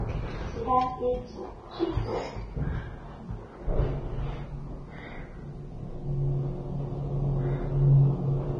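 A low-bitrate encode was most likely saved again as MP3 at a high bitrate, so the bigger file carries forward everything the first pass threw away in this clip of sounds. Throughout, nothing is present above about 9.7 kHz, leaving the top end dull and closed-in, and the artefacts still present fit an earlier heavily compressed Vorbis stream near 22 kbit/s. The later encode, which points to around 192 kbit/s, adds almost nothing audible of its own.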